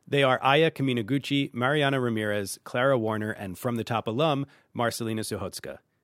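Nothing technical stands out in this short bit of speech; there's no fault to point to anywhere in it.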